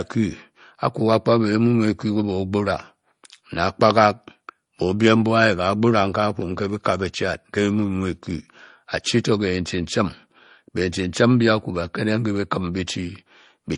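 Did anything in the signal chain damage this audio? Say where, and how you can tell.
Yes: transcoding between lossy codecs throughout, at the codec stage. The speech carries layered smearing and swirling, likely from low-rate MP3 near 40 kbit/s re-encoded as AAC-LC near 48 kbit/s.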